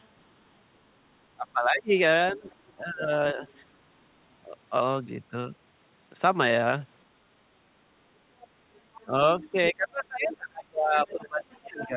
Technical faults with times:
0.02-0.07 other side's voice leaking through
1.35-3.49 speech suppressed in double talk
2.47-3.60 other side's voice leaking through
7.86-7.97 background gated by the echo canceller
8.41-9.49 other side's voice leaking through
9.06-11.97 speech suppressed in double talk
11.07-11.88 other side's voice leaking through

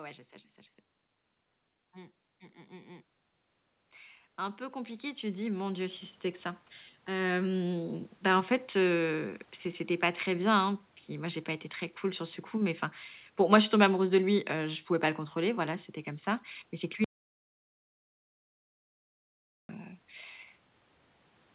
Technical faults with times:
1.92-3.11 automatic gain rising
4.57-8.14 automatic gain rising
17.04-19.69 audio dropout to silence

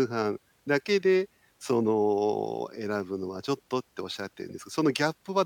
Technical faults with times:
none

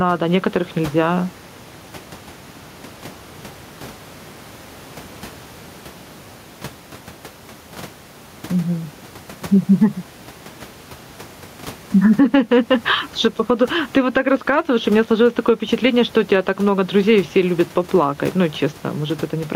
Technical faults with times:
0.00-19.55 gain pumping

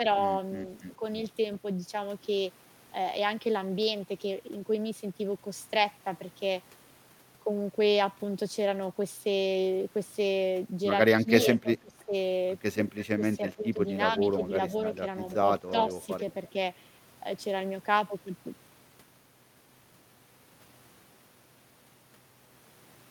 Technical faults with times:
11.24-11.30 speech suppressed in double talk
11.55-12.14 speech suppressed in double talk
12.96-13.06 echo leak
13.16-13.77 speech suppressed in double talk
13.36-13.52 echo leak
15.89-16.06 echo leak
15.91-16.08 speech suppressed in double talk

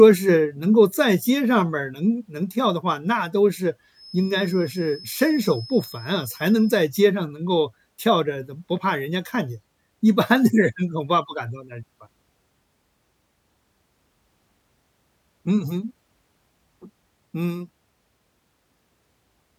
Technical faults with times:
3.92-6.93 feedback whistle

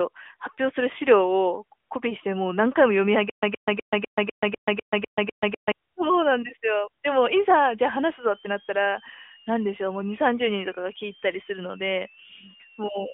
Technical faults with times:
2.10-2.14 lost AMR speech frames
3.30-5.72 stutter with silent gaps
7.83-13.14 switching supply whistle

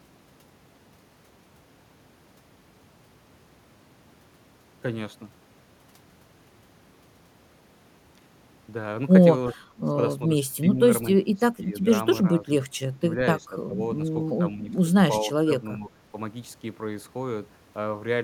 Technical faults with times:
9.49-10.30 speech suppressed in double talk
10.62-10.81 speech suppressed in double talk
11.22-11.89 speech suppressed in double talk
12.23-13.78 speech suppressed in double talk
14.55-14.89 speech suppressed in double talk
15.22-16.13 speech suppressed in double talk

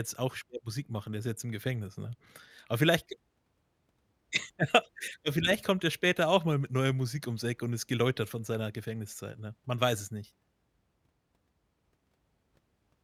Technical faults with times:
none

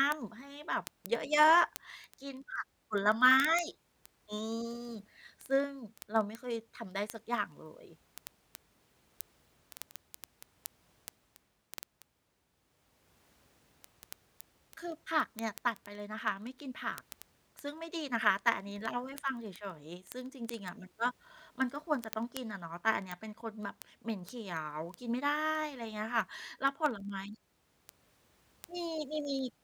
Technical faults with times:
0.12-29.62 word clock ticks

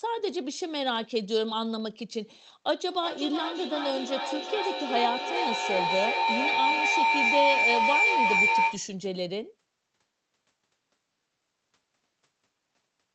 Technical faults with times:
2.84-8.95 feedback howl

